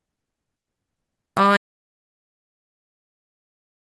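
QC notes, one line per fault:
1.57 s to the end: audio dropout to silence. The speech cuts off mid-flow and everything after is dead silence, with no room tone at all, so the input was likely lost while the recorder kept writing silence. Nothing from that stretch survives.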